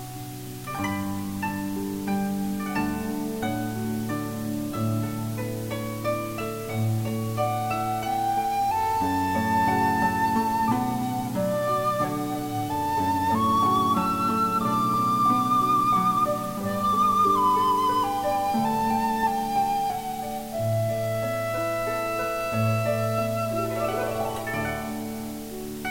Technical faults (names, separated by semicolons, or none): low bit depth with dither